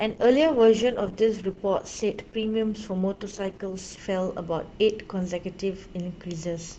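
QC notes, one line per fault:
0.00–4.00 s, adaptive stream starting at a low bitrate: treble is thin and smeared with heavier codec artefacts, which fits a 16 kbit/s Opus rung, then quality jumps with no gap, consistent with a 64 kbit/s rung. On a spectrogram the upper band stays empty or patchy until 4.0 s, then fills abruptly.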